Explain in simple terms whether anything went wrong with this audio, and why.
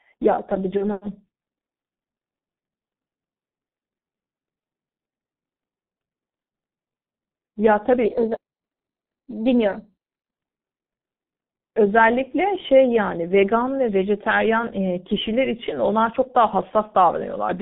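Yes, three things went wrong in this speech clip.

Throughout, the G.723.1 codec, an old low-rate internet-phone codec, leaves the voice muffled and hoarse, with smeared consonants. Nothing above about 3.6 kHz survives. Unlike a plain phone-line filter, it also roughens the voice itself, not just the treble.

From 0.77 to 1.01 s there is VoIP packet loss concealed by the speech codec. One 30 ms chunk went missing, and the decoder filled the gap by stretching the last sound into a fading buzz or hiss. The voice stays weak for a moment afterwards, which sets it apart from a clean dropout or click.

From 8.05 to 10.35 s there is a section at the wrong speed. It plays 1.12 times too fast, so the voice is hurried and roughly two semitones higher, likely from being played against the wrong clock. Pitch and pace shift together, unlike a pitch effect that leaves timing alone.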